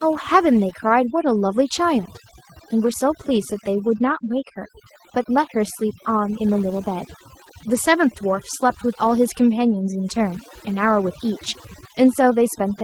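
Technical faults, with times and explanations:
throughout, overdone noise removal: bands near the noise estimate are pulled down hard, leaving a lowered background with twinkling specks.
throughout, Opus voice compression: plainly audible hybrid coding, linear prediction below 8 kHz with a coarse upper layer, consistent with roughly 16 kbps, making speech hoarse and slightly robotic.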